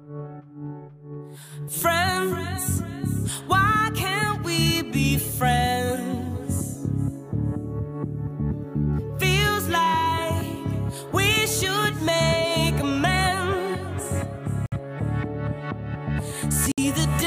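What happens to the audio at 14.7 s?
At 14.66 s the sound drops out completely. Silence lasts 58 ms, until 14.72 s. Then playback resumes. This is a Bluetooth stall, and the likely cause is radio interference. Packets were delayed on the wireless link. The headphones' small buffer emptied before replacements arrived. With nothing left to play, output paused. Once the resent packets came through, the audio picked up again. The result is a brief gap of silence.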